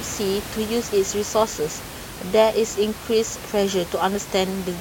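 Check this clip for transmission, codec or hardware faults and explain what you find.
Nothing wrong turns up here, just background noise from the room sitting about 13 dB under the speech, which comes from where the microphone was rather than from anything in the chain.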